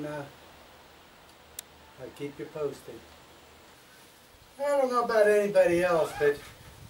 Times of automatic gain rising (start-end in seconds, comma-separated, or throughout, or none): none